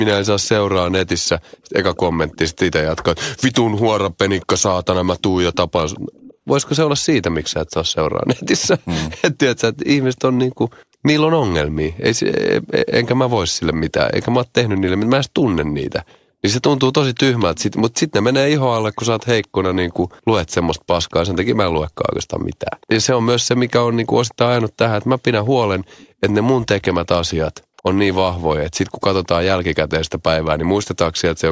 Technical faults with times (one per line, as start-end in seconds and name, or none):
0.42-11.97 echo leak
13.91-19.48 echo leak
21.09-31.21 echo leak